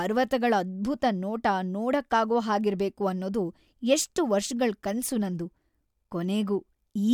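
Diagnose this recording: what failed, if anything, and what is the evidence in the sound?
Nothing failed in this speech recording: the signal holds steady throughout, with no audible defect at any stage of the chain from capture to playback.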